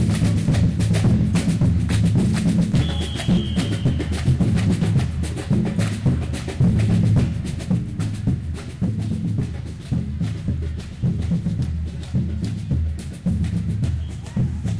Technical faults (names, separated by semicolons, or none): none